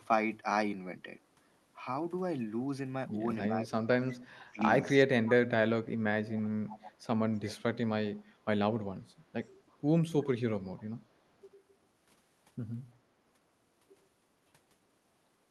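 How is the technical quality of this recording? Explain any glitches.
The speech is marred by two related call faults, one removing the talker's own voice and one adding a faint delayed copy of the other side's voice. Both sit on top of a call path whose coding keeps the band up to about 12 kHz.

Speech suppressed in double talk occurs at 3.47–4.74 s, 5.61–7.1 s, 9.34–9.4 s and 11.18–11.33 s. The voice dips by roughly 25, 35, 25 and 15 dB respectively. This likely happens because the echo canceller, hearing both sides at once, turns everything down. Unlike echo, nothing is added; the talker simply fades or gaps.

Echo leak occurs at 3.65–4.5 s, 6.3–6.38 s and 8.17–11.02 s. Far-end loudspeaker sound likely slipped past the echo canceller and was sent back. It is heard as a copy 335 ms late, about 25–30 dB below the speech. This is an extra repeated layer, not a loss of level.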